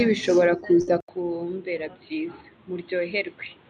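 At 0.81 s there's a burst of packet loss running to 0.89 s. The receiver stretches the last bit of speech for about 58 ms, so it hangs and fades, and then the talker picks up again with roughly 60 ms of material simply gone.

Right after, at 1.00 s, there's a short 80 ms silence, and from there to the end the sound turns dull and boxy, with nothing above 4.3 kHz. It's a few dB quieter and carries a new noise floor roughly 30 dB down. That's most likely the input switching to a poorer device.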